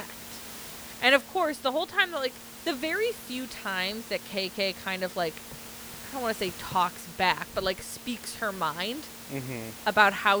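Nothing stood out on listening to this speech recording as a technical problem, with only the microphone's room noise sitting at about 16 dB below the speech.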